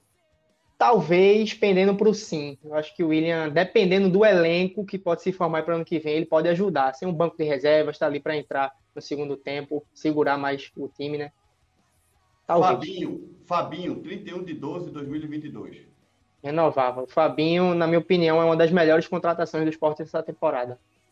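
Nothing stood out as a technical problem on listening to the audio.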